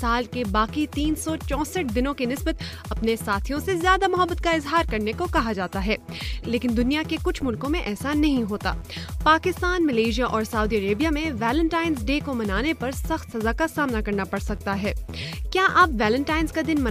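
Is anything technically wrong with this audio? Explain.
No, nothing technically wrong turns up anywhere in this audio, so there's nothing here that needs fixing.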